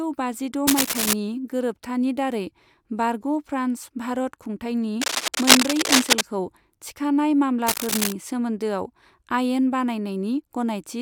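A worn cable or connector being moved is the likely cause: its contact resistance jumps about, injecting dense, uneven bursts of cable scratch noise into the speech. The first burst runs from 0.67 to 1.13 s, ending just before "गोरोबथानि दारै", roughly as loud as the speech. A longer, louder stretch follows from 5.01 to 6.21 s, rising above the speech, and a third, at speech level, from 7.67 to 8.12 s. Each is heard as rough scratching laid over the sound.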